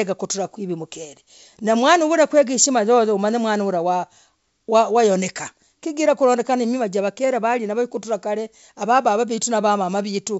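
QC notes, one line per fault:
1.05 s, bit errors on an ADPCM link: a short rough pop where a few flipped bits knock the decoder's step size and predictor off for a moment.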